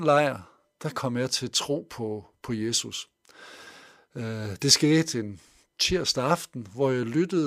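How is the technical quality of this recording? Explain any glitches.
No glitches or technical faults turn up anywhere in the recording.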